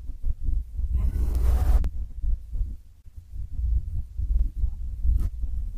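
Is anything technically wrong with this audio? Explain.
Yes. Overlapping chunks at 1.84 s and 4.39 s: the speech was processed in 2.5 s chunks that each restart 50 ms early, so that slice plays twice, heard as a brief stutter.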